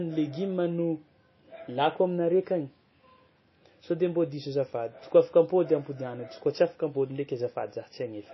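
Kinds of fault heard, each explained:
MP3 compression: the speech has nothing above 5.8 kHz, and the weak frequency content flickers in and out from frame to frame, giving a watery, swirly quality and smeared consonants. The damage is plainly audible and most likely comes from low-bitrate MP3 encoding, around 24 kbps. On a spectrogram there is a hard horizontal ceiling at 5.8 kHz and patchy, blocky holes below it.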